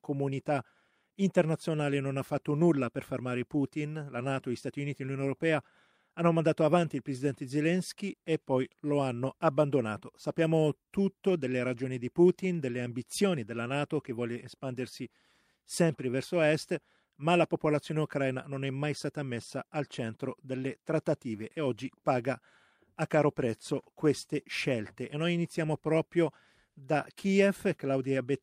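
Clock drift between sender and receiver runs through the whole of this speech recording. The sending device's clock is running fast, by something like 4 percent, so audio arrives slightly quicker than the receiving side plays it out. The jitter buffer steadily accumulates surplus material and has to shed it to avoid overflowing. That mismatch never settles, so the timing stays under constant pressure rather than drifting once and recovering.

The result is repeated timing corrections from 0.01 s to 28.25 s, with playback effectively running at 104 percent. Because the sender is fast, every correction goes the same way: the receiver trims out short slivers of audio to catch up. The cuts are small and unevenly spaced. They are heard, if at all, as faint hiccups and a slightly hurried, uneven pace in the speech rather than as obvious gaps.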